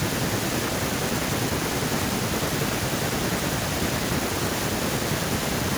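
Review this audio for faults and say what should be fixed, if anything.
No faults found in the speech; nothing to fix.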